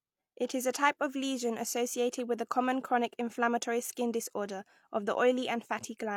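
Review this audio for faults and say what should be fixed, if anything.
A transform codec spread its quantisation noise across a whole block. At 0.73 s, after "is a", the noise sized for the sharp onset of "type of lesion associated" leaks about 12 ms ahead of it. This is pre-echo, a brief hiss that softens and smears that attack. Letting the encoder switch to shorter transform blocks around sharp transients, or giving it a higher bitrate, would prevent it.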